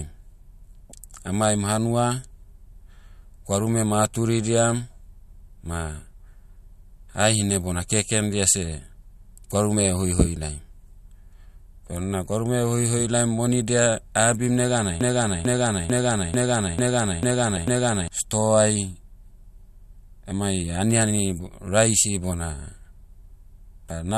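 At 0.90 to 0.92 s there is a corrupt frame decoded. A couple of compressed frames arrived with damaged bits, and the decoder played them anyway. Energy lands at the wrong frequencies for about 22 milliseconds. It comes through as a faint glitch, quiet at about -35 dBFS.

From 15.01 to 18.08 s the speech turns into a broken-record loop. A 0.44 s fragment repeats exactly, back to back, seven times. The speech that belonged in those three seconds never plays. The likely cause is a stalled player or stream that kept resending the last piece it held.

At 17.56 s, inside that loop, another corrupt frame decoded breaks through. A few frames are hit this time. Misread gains and codes throw energy into the wrong bands. The result is a sharp, loud glitch, peaking at about -15 dBFS.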